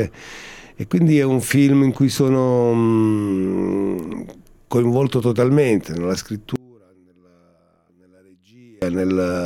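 From 6.56 to 8.82 s the sound sinks about 30 dB, likely one channel inverted; unlike a dropout, a faint residue remains.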